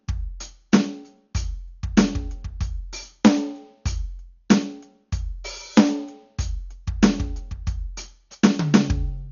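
Music, with heavy Dolby Digital compression throughout, likely from a bitrate near 48 kbps: a spectrogram shows a hard ceiling at 6.9 kHz, and the sound is dull, with rough, fluttering noise around tones.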